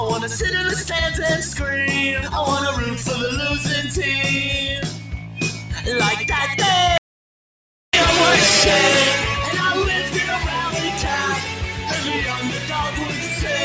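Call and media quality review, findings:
Noise suppressor applied to music or sounds, whole clip. Speech-tuned suppressor treating sustained tones and tails as noise, so level pumps with a swing of around 10 dB. Waveform: attacks intact, held portions sagging. Spectrogram: tails and ambience thinned, band ending near 8 kHz from the call path.

Sound cut by the noise suppressor at 4.9–5.72 s, 11.39–11.87 s, 12.33–12.74 s and 12.93–13.35 s. Suppressor misclassifying steady content as noise and ducking it by about 6 dB (about 5 dB in the last). Waveform: envelope dips. Spectrogram: decays truncated early.

Audio dropout to silence, 6.98–7.93 s, roughly 0.96 s. Likely input loss from a device, link or mute while the encoder kept writing silence. Sound stops and resumes abruptly with no room tone. Waveform: flat line. Spectrogram: fully black column across all frequencies.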